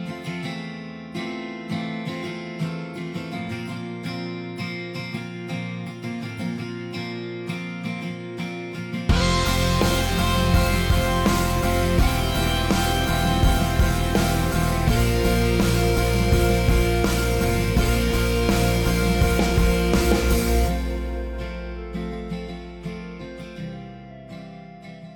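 Nothing stood out on listening; no technical faults could be heard anywhere in the recording.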